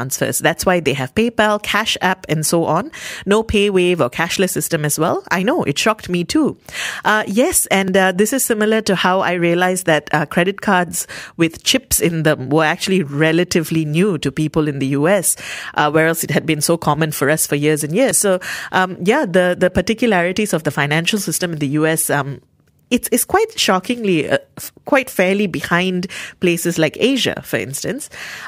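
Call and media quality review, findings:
A small forward skip in the speech at 4.5 s (after "or cashless"), 7.88 s and 18.11 s. Likely dropped buffer (overrun) in capture: roughly 20 ms of audio lost each time, joined edge to edge with no gap.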